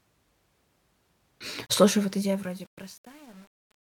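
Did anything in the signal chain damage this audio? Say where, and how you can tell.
Yes. The truncation distortion on the fade-out comes from a gain or sample-format stage that keeps too few bits and adds no dither. The speech fades out, and from 1.6 s the decaying level turns gritty. From 2.17 s to the end, the grit is at its worst. As the level falls, the waveform collapses onto a few coarse square steps, which fits a stage that keeps only 9 bits.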